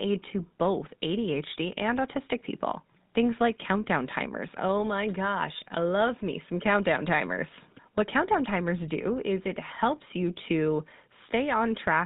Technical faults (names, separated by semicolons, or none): GSM full-rate codec